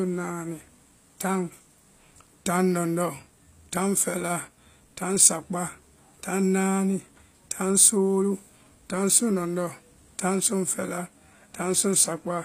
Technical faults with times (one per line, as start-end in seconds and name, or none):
0.00-12.44 HE-AAC compression